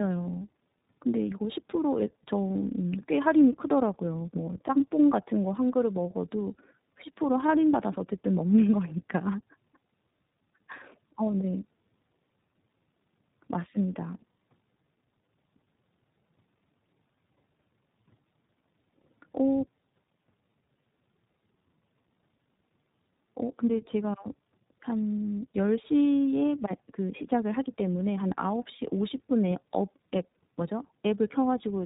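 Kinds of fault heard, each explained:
Tandem speech coding: The speech has gone through two low-rate speech coders back to back, with the second one re-coding the first one's already damaged output. That compounding makes it rougher and more muffled, with a warbly edge, and nothing above about 3.8 kHz.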